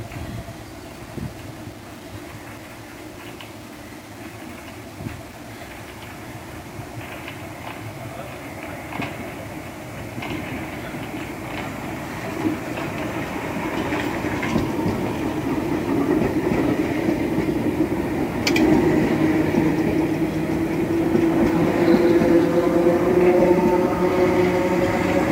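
Low bit depth without dither runs through the whole clip: a grainy, gritty distortion that rises and falls with the sound, worst in quiet passages. The likely cause is rounding to about 7 bits with no dither, leaving error roughly 25 dB below the signal.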